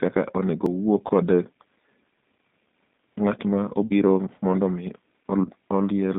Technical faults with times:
0.00-6.19 G.729 codec
0.66 CD skip
1.07-1.11 VoIP packet loss concealed by the speech codec
3.86-3.94 VoIP packet loss concealed by the speech codec
5.44-5.49 VoIP packet loss concealed by the speech codec

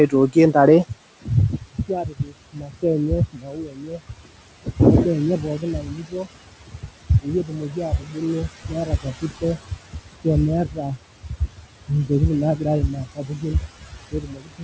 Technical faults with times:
0.00-14.63 noise suppressor artifacts
0.07-4.80 speech cut by the noise suppressor
5.40-10.26 speech cut by the noise suppressor
10.65-12.11 speech cut by the noise suppressor
12.57-14.63 speech cut by the noise suppressor

